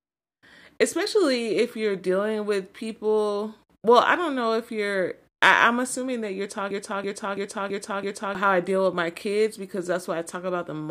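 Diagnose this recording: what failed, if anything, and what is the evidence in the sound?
The playback or streaming buffer likely stalled, so the stage kept resending the last fragment it held, producing a broken-record loop. After "am assuming that you're", from 6.71 s to 8.35 s, a 0.33 s fragment of speech repeats exactly, back to back, five times, a stuttering replay with identical timing on every pass. Whatever should have played during those 1.6 s is gone, and the speech resumes at "how i deal with".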